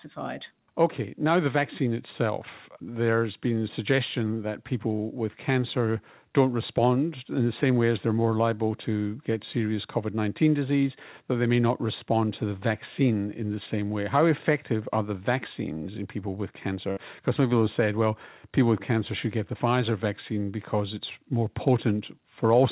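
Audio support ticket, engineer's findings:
Burst of packet loss at 16.92–16.99 s. About 45 ms of the last sound held as a fading buzz/hiss, then playback resumes roughly 40 ms further on with that audio skipped. Probable component: jitter buffer concealment after late or lost packets on the call path. Unlike a plain dropout or mute, there's no silence: the gap is filled by the stretched, decaying tail. Path band-limited below 4 kHz, consistent with 64 kbps G.711 A-law.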